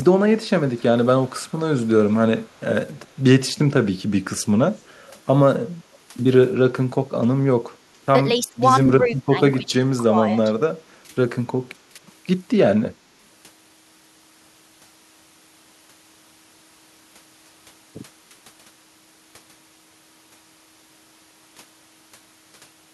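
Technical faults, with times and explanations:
0.77–1.88 s, 2.41–2.96 s and 4.8–5.21 s, echo leak: a faint delayed copy of the speech trails it by 272 ms, about 30 to 40 dB below the direct sound. This is likely a far-end loudspeaker echo that the echo canceller failed to remove and sent back down the line.
6.74–6.8 s, 8.39–10.49 s, 11.05–11.1 s and 11.95–11.99 s, speech suppressed in double talk: the speech level dips by about 5 to 10 dB in the brief moments and by up to about 20 dB over roughly a second within the long stretch. This is likely an echo canceller mistaking overlapping talk for echo and turning the speech down.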